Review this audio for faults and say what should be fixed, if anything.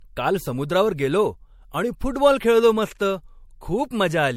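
The speech has likely been through MP3 encoding several times over, about four passes at something like 64 kbit/s. Each pass re-quantises on a shifted frame grid, so the noise and spectral gaps stack up. Throughout, the sound is swirly, smeared and hollow, attacks are blurred, and nothing remains above 16.5 kHz. This generation loss can be prevented by keeping a lossless master and encoding to MP3 only once, at the final step.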